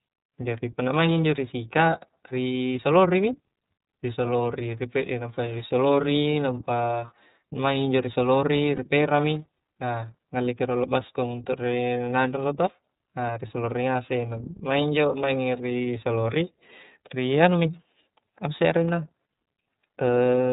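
The whole clip runs through the iLBC codec, so the speech is band-limited to nothing above 4 kHz and has a plainly audible rough, slightly synthetic edge. The coding texture fits iLBC's 13.33 kbps mode, which codes each 30 ms frame on its own.

At about 8.76 to 8.79 s there's a brief lost iLBC frame. The decoder fills the hole by repeating the last pitch cycle with some noise mixed in, so you hear a short held, faintly buzzy vowel. That gap points to a single missing 30 ms frame, and because iLBC frames stand alone, the voice snaps back right after.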